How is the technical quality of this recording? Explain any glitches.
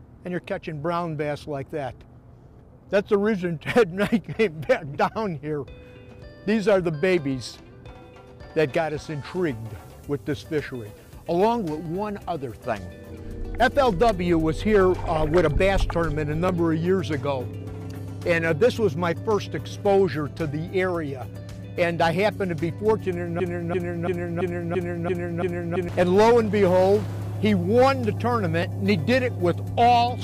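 The recording has two kinds of glitch: isolated clicks scattered through it and one stretch where the audio sticks and repeats.

Dropped samples cause sharp single clicks at 7.19, 8.68, 10.65, 11.86, 16.49 and 28.63 s. Each likely comes from a tiny gap, well under a millisecond, where the waveform jumps straight to a later value. That step produces a thin vertical line across the spectrum. Unlike a dropout, no audible sound goes missing. There is only the tick.

A broken-record loop runs from 23.40 to 25.89 s. The stream likely stalled and kept replaying its last held fragment, a piece about 0.34 s long that repeats exactly, back to back, seven times. What should have played there is lost. Unlike a stutter or echo, the repeats are identical and evenly spaced, with no decay and no variation between them.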